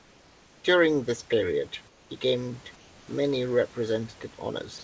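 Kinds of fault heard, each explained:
Comfort noise in place of the background: In the pauses at 0.00 to 0.64 s, 1.88 to 2.10 s (between "this period" and "gained many"), and 2.76 to 3.08 s, the room's background, about 28 to 32 dB below the loud speech, turns into a steady, featureless hiss about 3 dB quieter. This is likely discontinuous transmission with synthetic fill. Unlike a voice-detector drop, no speech is lost. Only the texture of the silence changes, then the real background returns with the speech.
Sound dropped by the voice detector: At 4.78 s, right at the end, the last 61 ms give way to steady noise, and about 30 ms of actual speech tail vanishes with it. The sender's detector likely judged the fading ending to be background and stopped sending. Unlike comfort noise in a pause, this cuts into the sound itself, so the final ending is clipped short rather than a gap merely sounding flatter.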